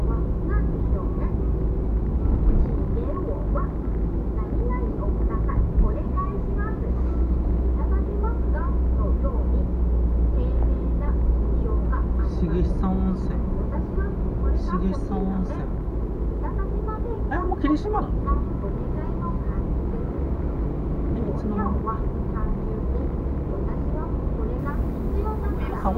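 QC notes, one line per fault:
24.59–25.98 s: pre-emphasis left on. The treble lift applied for transmission was never undone, so at 10 kHz the highs stand about 10 dB above 1 kHz, following a 50 µs FM curve. Unlike a flat shelf boost, it rises steadily with frequency, giving thin, sibilant brightness.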